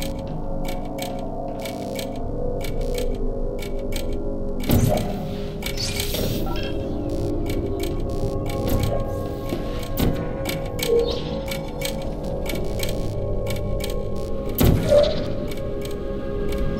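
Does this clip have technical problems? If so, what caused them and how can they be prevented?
Yes. Computer activity noise runs throughout: load changes disturb the shared ground, adding a faint buzz pulsing about 70 times a second, around 30 dB below the sound, seen as flickering evenly spaced spectrogram bands. Prevent it with a ground-isolated external audio interface or a USB isolator.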